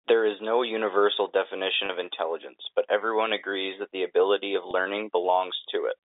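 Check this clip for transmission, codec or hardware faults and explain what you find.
Two brief dropouts of the packet loss with pitch repetition kind, at 1.86 s and 4.71 s, each about 30 ms long. At both points the speech catches for an instant on a slightly held, buzzy tone instead of breaking into silence. The receiver is covering a gap that fits a single lost packet by repeating the last pitch period, so the waveform loops for those 30 ms before fresh audio arrives and the sound continues. The telephone band running through the clip, roughly 200 Hz to 3.7 kHz from G.711 telephone coding, is not itself a fault.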